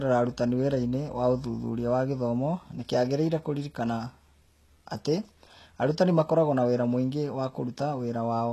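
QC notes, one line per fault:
Throughout, HE-AAC compression: the treble sounds synthetic, s sounds come out gritty and lispy, and nothing remains above 12.3 kHz. The likely cause is spectral band replication rebuilding the top from copied lower bands, which fits roughly 16 kbps.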